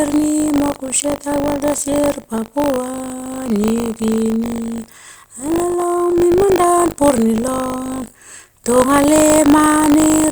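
Buffer tearing runs through the clip. The writer and reader of the ring buffer have slipped and cross every period. A few percent of each buffer replays audio about 40 ms old. The hard joins make a robotic 50 Hz buzz under the speech.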